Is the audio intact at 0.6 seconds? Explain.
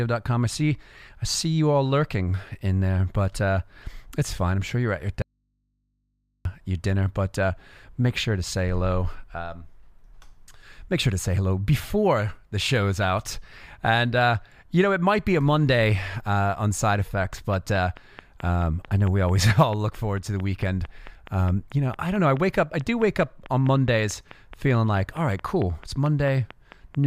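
Yes, at 0.6 seconds the speech plays through intact, with no dropout, click, distortion or other fault at that moment.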